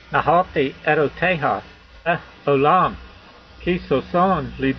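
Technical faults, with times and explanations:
1.72–2.08 s: AAC frame loss with concealment. Across about 0.34 s, roughly 213 ms of audio goes missing in scattered gaps, which fits a handful of dropped AAC frames, with the longest unbroken gap around a tenth of a second. For each missing stretch the decoder rebuilds the sound from the last good spectrum, scrambling signs or interpolating energy, so the gaps come out as smeared, noisy, phasey patches instead of clean sound.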